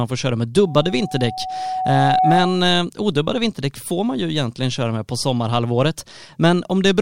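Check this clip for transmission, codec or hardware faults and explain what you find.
One fault, a loudspeaker feedback squeal, runs from 0.66 to 2.75 s, just after "får köra med" and ending before "odubbade vinterdäck får man". A steady 746 Hz tone swells over about a second and a half until it sits roughly 5 dB above the speech. The microphone is picking up its own loudspeaker, and at that frequency the loop gain exceeds one.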